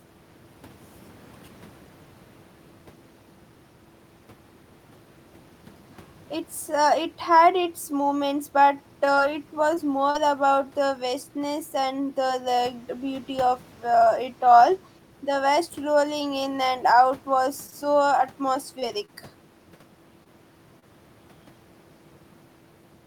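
From 9.05 to 10.17 s the speech turns choppy: repeated packet loss left four gaps, the longest 41 ms, each patched by extending the preceding sound. Brief smears or wobbles then occur at 17.70–17.74, 18.80–18.84, 19.06–19.10, 20.24–20.27 and 20.79–20.84 s, each a short concealed packet loss where about 20 ms of audio was missing and filled by continuing the last sound.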